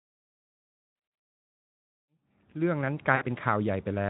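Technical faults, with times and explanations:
0.95–1.19 s, VoIP packet loss concealed by the speech codec: about 160 ms of audio lost in scattered gaps, longest 60 ms; the decoder extrapolates pitch and filter, giving buzzy or noisy, fading, weakened sound.
3.15–3.24 s, VoIP packet loss concealed by the speech codec: 60 ms of audio lost just after the fade-in ends at 3.11 s, bridged by a decaying buzzy or noisy extension that leaves the sound briefly thin.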